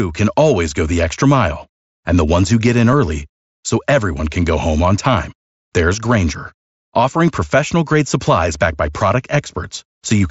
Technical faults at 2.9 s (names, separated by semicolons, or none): concealed Bluetooth headset packet loss